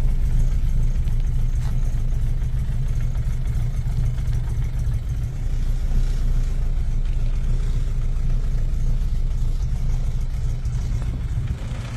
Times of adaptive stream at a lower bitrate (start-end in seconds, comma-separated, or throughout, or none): 5.27-11.96